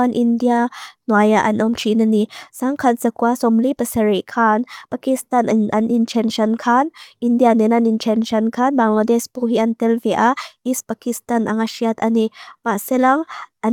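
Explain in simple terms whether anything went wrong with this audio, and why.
Nothing went wrong here: the speech recording holds together as a steady, continuous signal with no technical faults to point to at any moment.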